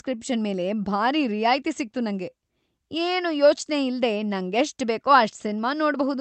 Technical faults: clock drift between sender and receiver; repeated timing corrections; short stall from a late packet

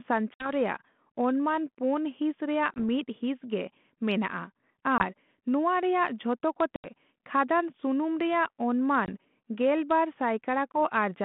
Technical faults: packet loss on an ADPCM call

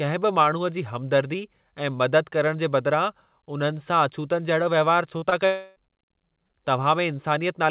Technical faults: short concealed packet loss; long network dropout

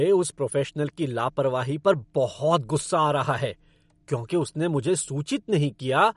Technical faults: MP3 compression

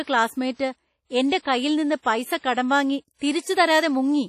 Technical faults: WMA compression; pre-echo

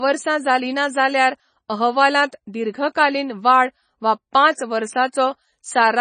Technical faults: MP3 compression

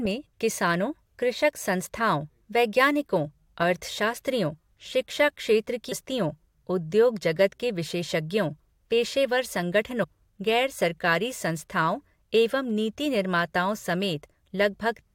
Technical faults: damaged data in a compressed stream

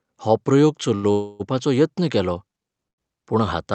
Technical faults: short stall from a late packet; call audio freeze

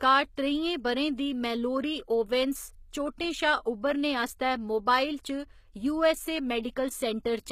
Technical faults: HE-AAC compression; pre-echo

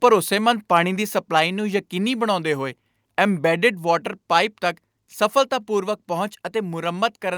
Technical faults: microphone overload

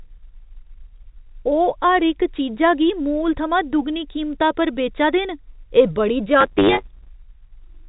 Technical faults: block size mismatch (truncated)

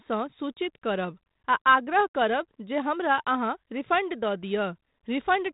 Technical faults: none

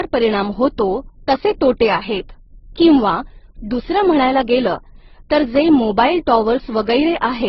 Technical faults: transcoding between lossy codecs

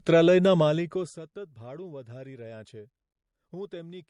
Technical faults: transcoding between lossy codecs

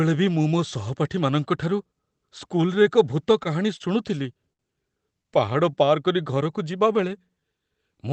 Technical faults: repeated stalls (stutter); jitter buffer slow-down

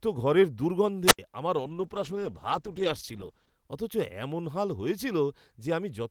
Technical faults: wireless microphone squelch dropout; call bitrate drop

